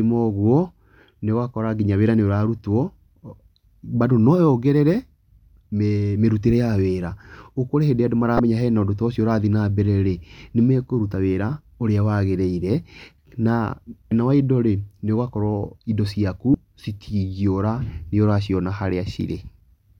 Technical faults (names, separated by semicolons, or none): damaged data in a compressed stream